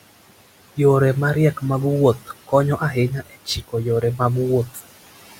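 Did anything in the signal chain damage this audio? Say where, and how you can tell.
Yes. The call-processing noise suppressor leaves artifacts throughout. The room noise, which sits about 17 dB below the speech, is pulled down by about 17 dB between phrases and returns under them. That pumping, gated by the speech itself, is what separates it from a noisy room.

The same stage also cuts speech, between 3.1 and 3.74 s (dipping as far as about 17 dB over roughly a fifth of a second) and again at 4.66 to 4.81 s (about 10 dB). Soft speech there was taken for noise and sounds swallowed. A dropout would be abrupt silence instead.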